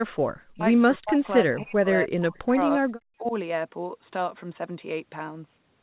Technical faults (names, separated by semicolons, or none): speech suppressed in double talk